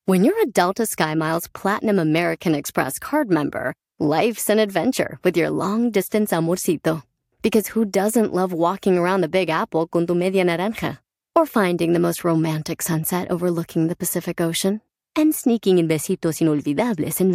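Nothing stood out on listening to this speech recording.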